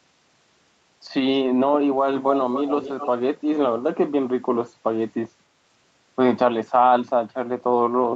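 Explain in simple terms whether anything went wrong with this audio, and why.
From 2.26 to 3.08 s, a second copy of the speech trails the original by about a quarter of a second, only slightly quieter. This is an echo leak: the other side likely used a loudspeaker, and its echo canceller let some of the sound back into the call.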